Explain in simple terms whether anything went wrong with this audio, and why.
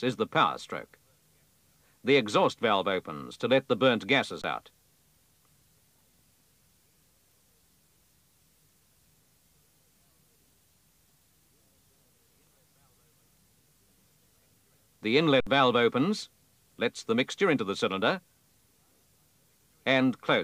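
Two short dropouts, both an underrun with held sample. Around 4.42 to 4.44 s, and again from 15.40 to 15.47 s, the playback buffer ran dry, so the converter just froze on its last value until data arrived again. You hear the sound simply stop for about 21 ms and then 64 ms. The first gap fits a 1024-sample buffer. In both cases a bit of audio was skipped rather than paused, roughly 20 ms and 70 ms.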